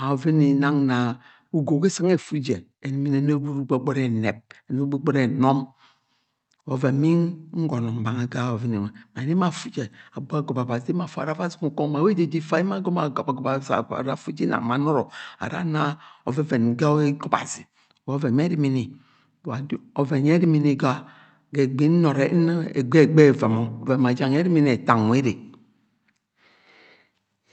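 No technical faults are audible.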